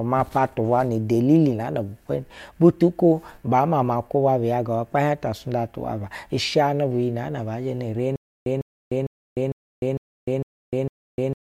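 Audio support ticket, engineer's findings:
Stutter with silent gaps from 8.16 s to end of clip: 152 ms speech fragment repeated 7 times, each followed by 302 ms digital silence, steady 453 ms cycle. Likely player/stream stall, each retry replaying last buffered fragment then running empty; intervening audio lost.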